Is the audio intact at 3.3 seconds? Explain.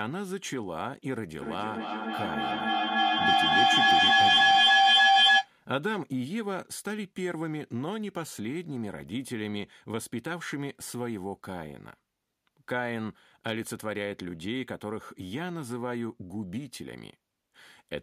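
No. Feedback echo between two devices runs from 1.42 to 5.53 s: speech returns roughly every 300 ms, building to about 12 dB above the speech.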